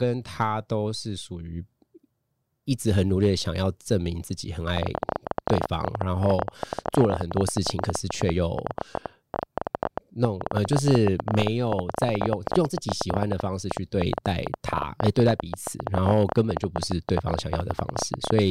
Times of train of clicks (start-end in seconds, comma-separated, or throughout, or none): 4.77-18.40